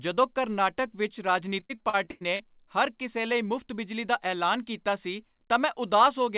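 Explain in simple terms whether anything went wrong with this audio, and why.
Repeated packet loss (robotic sound), 1.6 to 2.41 s, right after "ਕਰਨਾਟਕ ਵਿੱਚ": eight short gaps were patched by repeating the last sound, so it turns choppy and robotic.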